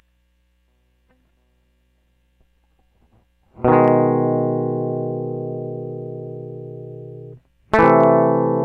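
At 3.85 to 3.88 s, and again from 7.74 to 8.04 s, the music drives a stage past the largest value it can represent, by about 3 dB the first time and about 4 dB the second. This is hard clipping: the peaks are sheared off flat, spraying high harmonics across the top of the spectrum. The first event is a brief crackle on the peaks. The second lasts longer and is heard as crackle on its peaks.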